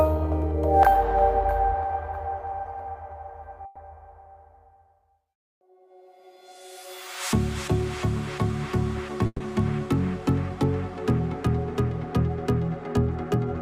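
Burst of packet loss at 3.65–3.78 s and 9.26–9.42 s: lost packets were concealed by extending and fading the last sound (110 ms, then 140 ms), skipping 100 ms and 140 ms of audio.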